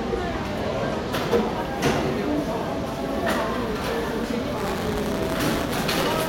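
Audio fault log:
4.57–6.29 s, buffer tearing: a steady robotic rattle at 172 Hz, which fits a 256-sample buffer, as a small slice of each period replays audio from about 20 ms earlier with hard joins. Unlike dropouts, there are no silent gaps, and the buzz follows the signal.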